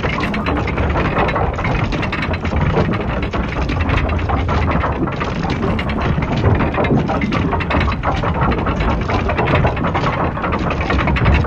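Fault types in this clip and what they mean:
No audible faults of any kind are present.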